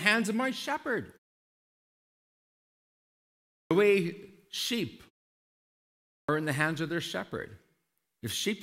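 Clipped start after a pause at 3.64 s and again at 6.22 s: after silences of about 2.5 s and 1.2 s, the output device has gone idle and needs time to wake before it passes sound. The first 67 ms and 65 ms of speech are lost, so each word bursts in abruptly with its opening sound missing.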